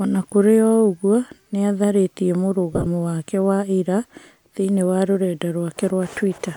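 A speech clip with two brief gritty, hissy smears from lost LE Audio frames: one at 0.30 s before "kũrĩ o ũguo", and a scattered stretch from 2.73 to 2.87 s, with gaps of up to about 20 ms, before "wake wa ira thĩiniĩ". The LC3 decoder filled the missing frames by reusing the previous spectrum with randomised phase.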